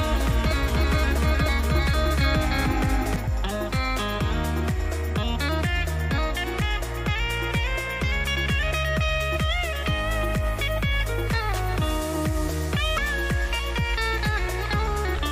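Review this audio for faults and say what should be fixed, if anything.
From the very start until 3.16 s there is a doubled audio track: a second, full-band copy of the sound, roughly as loud as the original, trails it by around 300 ms. The likely cause is the audio being captured twice, once through a slower path, or an edit leaving two copies out of step. Unlike an echo or room reflection, the copy has no decay and no reverberant colour, and it cuts off abruptly at 3.16 s. To prevent it, make sure only one capture path feeds the mix, and check edits for duplicated regions.

Damaged data in a compressed stream shows up as short chirps or blips at 3.26 s, 9.35 s, 12.97 s and 15.18 to 15.20 s. At each point, corrupted or missing bytes make the decoder misread frames, lose sync and hunt for the next frame header, which leaves a brief glitch. To prevent it, use a reliable transport or file transfer with error checking, and keep metadata out of the audio frames.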